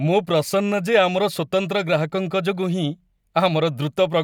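No technical fault can be heard anywhere in the speech recording, and the signal gives nothing to point to in its capture, processing or transmission.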